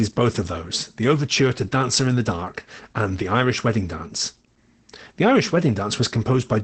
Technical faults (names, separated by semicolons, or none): Opus voice compression